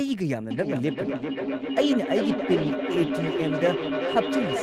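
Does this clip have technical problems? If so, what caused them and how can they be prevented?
Yes. From 0.51 s to the end, there is a feedback echo between two devices. Each phrase comes back at a fixed interval of roughly 0.4 s, thinner and more ringing, and its loudest return is about 3 dB below the speech. A second device in the room replays this microphone's signal, and this microphone picks it up again. Each echo canceller only removes its own device's playback, so nothing cancels that return. Room reverberation decays smoothly, but here the repeats arrive as distinct copies at a steady spacing. To prevent it, mute the microphone and speaker on all but one device in the room, or use headphones.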